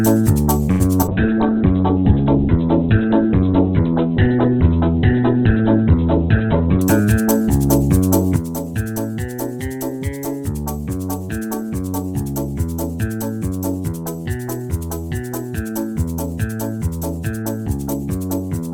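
At 0.71 s a short stall from a late packet holds the sound for 0.1 s: the jitter buffer ran dry, the receiver stretched the last frame for 86 ms until the packet arrived, then resumed where it left off. Nothing is lost, but the sound hangs with a faint buzz, and the playout delay grows by 86 ms.

At 1.02 s and again at 1.06 s comes short concealed packet loss, about 20 ms of real audio each time. The decoder bridged each gap by extending the preceding sound and crossfading back, which leaves a quick smear or wobble.

From 1.09 s to 6.88 s a call bitrate drop takes hold. The encoder was pushed down, which fits a fall from 48 to 8 kbps, and audio bandwidth shrinks from 20 kHz to 4 kHz. For roughly 5.7 s the sound is muffled and grainy before full detail returns.

Between 1.34 and 1.55 s a jitter buffer slow-down adds 36 ms by repeating pitch periods back to back. Playback runs at 87% speed at unchanged pitch, so the sound drags.

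From 6.6 to 7.43 s a jitter buffer speed-up trims about a tenth of a second by cutting short pitch-period segments. The audio plays at 110% speed with pitch intact and sounds rushed.

At 8.36 s a sudden gain jump drops the level by about 8 dB to the end of the audio, with the background noise falling by the same amount. The cause is likely a digital gain change applied without a ramp.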